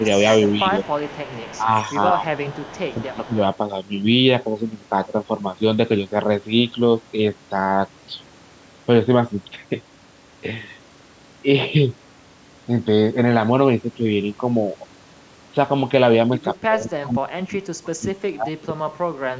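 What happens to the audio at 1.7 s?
The speech dips sharply in level for a brief stretch between 1.6 and 1.72 s, sinking by around 10 dB at its deepest, with roughly a tenth of a second affected in all. This is speech suppressed in double talk: with both ends talking at once, this talker's own echo canceller likely could not tell them apart from its loudspeaker pickup and attenuated everything together.

Underneath that same moment sits a faint, delayed copy of the speech, trailing the original by about 182 ms at a level around 20 dB below it. It runs from 0.44 s to 1.91 s, so it spans 1.7 s too. This is an echo leak. The likely cause is a loudspeaker on one side whose echo canceller let part of the replayed audio back into its microphone, which then returned it down the line.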